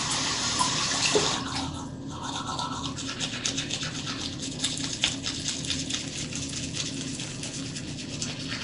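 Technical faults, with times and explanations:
Throughout, Nellymoser compression: a rough, hissy halo and a smeared, underwater blur sit on the sound, with nothing above 10.6 kHz. This is likely a fixed-budget block codec that fills starved bands with noise rather than leaving MP3-style watery gaps. The damage fits a rate near 44 kbps.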